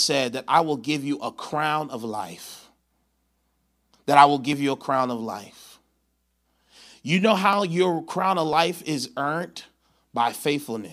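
No technical faults are audible.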